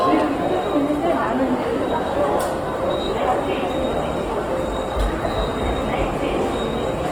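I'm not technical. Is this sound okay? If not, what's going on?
No. Throughout the clip, the sound comes across as rough and grainy, with tones smeared into a fuzzy noise rather than staying clean. This is likely Opus compression: squeezed too hard, it fills in lost detail with noise-like texture.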